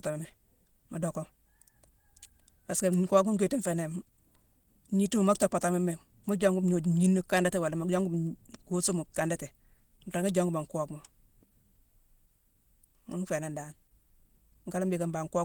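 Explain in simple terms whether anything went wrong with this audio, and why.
Yes, something went wrong. From start to finish the speech has a hoarse, grainy roughness, likely from Opus compression squeezed too hard. Short of data, the encoder switched to its hybrid speech mode and filled in detail with noise, though high frequencies still reach the top.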